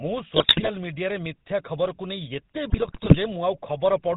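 Throughout the clip the speech has a buzzy, gravelly roughness and nothing above 4 kHz, so sibilants sound dull and clipped. This is GSM full-rate codec damage, and it is plainly audible. The codec rebuilds the voice from a vocal-tract model excited by regularly spaced pulses, keeping only every third excitation sample, which fits a 13 kbps full-rate stream. That coarse, pulse-driven excitation is what gives the voice its grainy buzz.

From 0.36 to 0.70 s and again from 2.70 to 3.17 s, the speech breaks into squawks, pops and gargling. Within these stretches the tone warps and the level jumps abruptly. These are GSM bit errors. Corrupted bits reached the decoder, so the filter, pitch and gain values it received were wrong, bending the spectrum and spiking the level frame by frame. The damage fits an error rate of around 5 percent, with the second burst longer.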